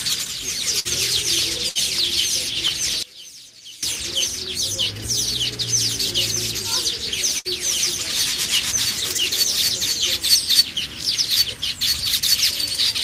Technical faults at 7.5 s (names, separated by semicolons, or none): burst of packet loss